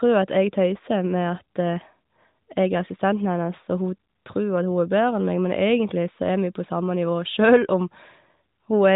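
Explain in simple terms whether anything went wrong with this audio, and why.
Nothing went wrong here: the speech has come through the AMR narrowband mobile codec used on ordinary phone calls, which gives it the familiar phone-line sound with nothing above 4 kHz, and no faults can be heard anywhere in it.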